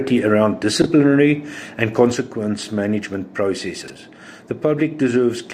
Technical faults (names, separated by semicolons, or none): chunks out of order; sudden gain jump